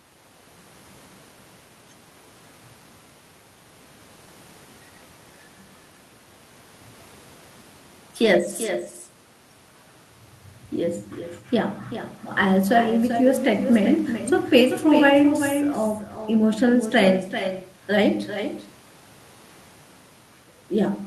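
Across the whole recording, an echo with no canceller trails the speech: a copy about 8 dB quieter returns after roughly 0.4 seconds, thinner. The far end's loudspeaker feeds its microphone unchecked. The long, fixed delay separates it from room reverberation.

At 8.23–8.25 s, and again at 16.15–16.25 s, a lost packet is rebuilt from error correction. The decoder plays a low-bitrate backup copy carried in the following packet, so the speech turns briefly rough and noisy. The first spot lasts 20 ms, fitting one lost packet, and the second lasts 60 ms, fitting three. No silence or dropout occurs, which tells this apart from plain concealment or a gap.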